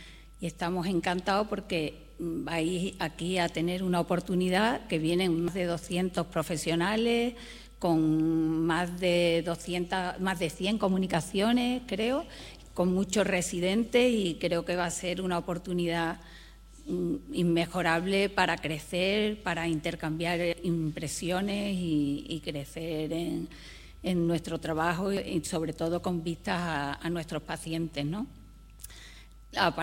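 At 5.48 s, 20.53 s and 25.17 s the sound jumps abruptly forward, each skip cutting out roughly a tenth of a second with no gap of silence; at 28.79 s a larger jump removes about a fifth of a second. The likely cause is a dropped buffer (overrun): the recording software fell behind, the hardware overwrote unread samples, and the audio on either side of each lost block was spliced directly together.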